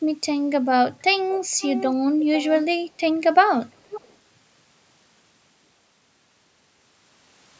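Speech carrying a faint delayed copy of itself at 1.51–1.85 s, 2.21–2.65 s and 3.66–4.16 s, each trailing the original by about 0.49 s, around 15 dB down, or nearer 10 dB at the second. This is likely an echo leak from a far-end loudspeaker its canceller missed. A spectrogram shows ghosted, fainter harmonic traces offset half a second right, all beneath the call processing's 8 kHz ceiling.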